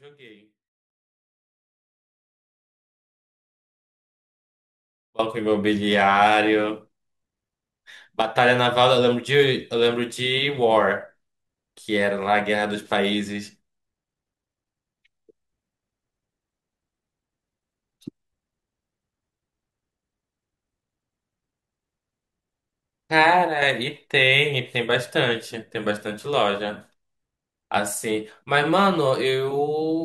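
A speech recording that opens in an audio dropout to a faint residue: from the start until 5.19 s the speech sits roughly 25 dB down, a faint leak rather than silence, and it returns abruptly instead of fading in, so it is not a pause, most likely a signal path that broke while the downstream chain stayed live. At 8.22 to 8.35 s and 23.47 to 23.62 s, one channel drops out: the level falls about 6 dB for roughly 140 to 150 ms while the sound keeps its tone, the likely result of a lost stereo channel before the mono sum, unlike a full dropout.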